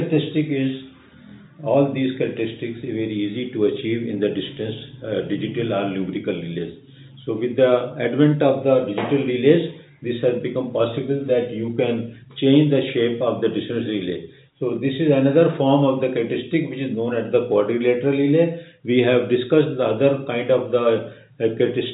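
No technical faults can be heard: the audio carries the narrowband character of a call path working as expected, with nothing above 4 kHz, which fits a G.711 mu-law codec at 64 kbps.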